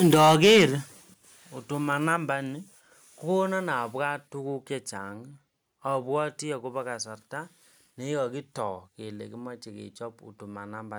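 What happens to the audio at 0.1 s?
The microphone's input was likely driven too hard, about 8 dB past what the converter can represent, so from 0.03 to 0.65 s the waveform peaks are sliced flat. This is microphone overload, and it gives the speech a harsh, crackling edge, with a sizeable share of the samples clipped.

At 0.14 s the call software likely responded to that distortion by pulling the microphone volume down in a single step of 4 dB. Speech and background drop together at once, an abrupt step in level early in the clipped stretch.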